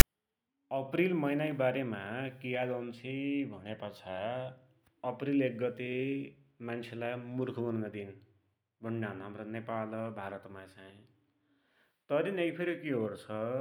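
At 0.0 s, the player decodes a block of text file tags as if it were audio samples, producing file tags played as audio. The text bytes become a brief, loud rasp offset to one side, a hard-edged burst of static before the speech begins.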